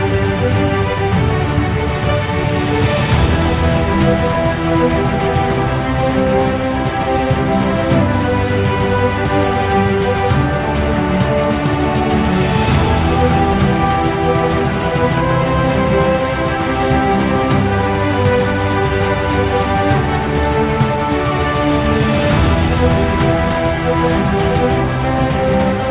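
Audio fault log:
2.44–2.46 s, skip ahead: roughly 0.4 s of audio vanishes and playback jumps straight on without a silent gap, unlike a dropout, as audio was dropped on the way or by the overflowing buffer while later audio was already waiting.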